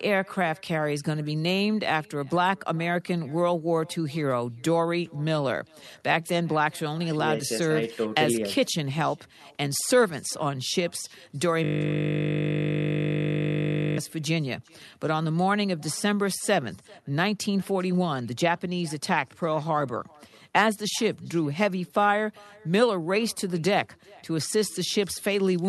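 A far-end loudspeaker is feeding the call back into its own microphone with no echo canceller, so throughout the speech a faint copy, about 28 dB down, returns roughly 0.4 s later, thin, trailing each phrase.

From 11.64 to 13.98 s, a system hang loop occurs: the machine or driver froze while the audio hardware kept replaying one 20 ms slice, which fits a 20 ms buffer. Repeated over a hundred times, it becomes a steady 50 Hz buzz in place of the speech.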